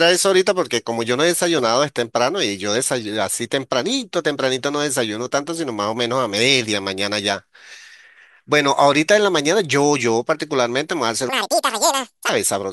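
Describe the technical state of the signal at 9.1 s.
At 9.1 s the speech signal is intact, with no audible fault at that point.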